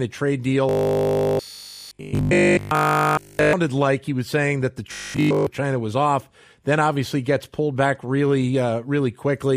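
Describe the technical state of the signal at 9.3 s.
At 9.3 s the signal is intact, with no audible fault at that moment.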